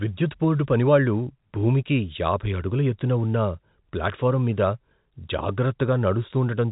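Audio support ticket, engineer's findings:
No faults found here; the narrow telephone sound with nothing above 3.8 kHz is just the G.711 mu-law coding at 64 kbps doing its normal job.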